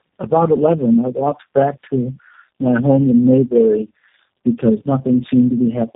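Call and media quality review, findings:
Tandem speech coding throughout: rough, muffled, warbly speech cut off above 3.7 kHz. Compounded artefacts point to several low-rate codecs in series, worse than any single codec.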